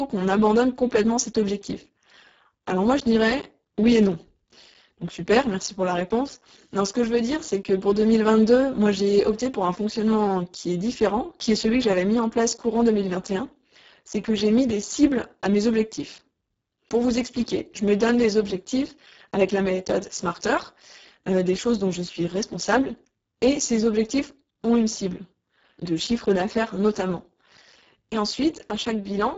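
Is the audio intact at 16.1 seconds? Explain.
No. At 16.1 seconds the speech carries heavy Speex codec damage, present throughout the clip. With very few bits for the excitation, the voice sounds hoarse and noisy, which fits a bitrate near 6 kbps. A spectrogram shows smeared harmonics, noise-like fill in the upper band, and nothing above 7.7 kHz.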